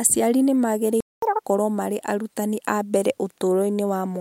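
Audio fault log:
1.00–1.22 s playback stall: speech halts mid-flow for about 0.22 s, then resumes where it stopped rather than skipping ahead, likely from the player running out of data.
1.22–1.44 s catch-up at higher speed: audio races at double speed, pitch up roughly ten semitones, unlike a pure pitch fault, then settles before "marĩ arutani a mbere".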